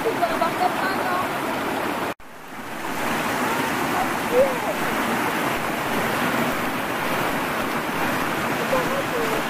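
Nothing is technically wrong with this audio; no faults can be heard anywhere in it.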